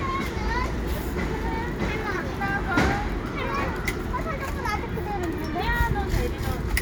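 Nothing in the audio stood out as a technical problem on listening.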